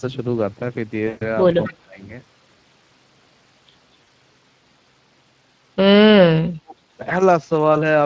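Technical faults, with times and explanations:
Throughout: Speex codec. The speech is hoarse and grainy, as if rough noise is mixed into each voiced sound. That is CELP coding with too few excitation bits, which points to a middle bitrate near 20 kbps. The sound stops entirely at 8 kHz.
1.07–1.30 s and 4.03–4.08 s: VoIP packet loss concealed by the speech codec. The first gap lasts about 140 ms, which fits seven lost 20 ms frames. The decoder repeats its last pitch and filter, so the sound smears into a fading buzz or coloured noise. The 40 ms gap is a brief blur. Neither is a delayed copy of earlier speech.
1.63–1.73 s: echo leak. A faint copy of the speech returns about 234 ms later, roughly 20 dB below the voice. The likely cause is a loudspeaker echo that the far end's canceller failed to remove. Unlike concealment, this repeats real earlier speech rather than stretching one sound.
1.68–2.01 s and 6.16–6.75 s: speech suppressed in double talk. 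The voice dips sharply, about 25 dB at its deepest in the first span and around 40 dB in the second. This likely happened because the echo canceller turned everything down while both sides talked at once. The voice dips instead of smearing into a buzz.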